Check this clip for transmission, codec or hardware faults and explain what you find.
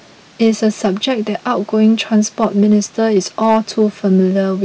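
One fault is present: hard clipping, throughout the speech. The signal was driven about 4 dB past what a stage in the chain could pass, so the loudest peaks, about 0.7 percent of samples, are sliced flat. Those squared-off tops add high harmonics, heard as brief crackle on the strongest moments.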